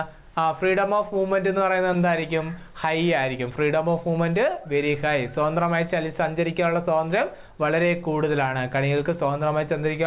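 At 1.58 to 1.62 s there is a short stall from a late packet. A packet missed its slot and the jitter buffer ran dry. The last sound is held about 15 ms too long, with a slight buzz or dip. Nothing is lost, and the sound then resumes where it left off.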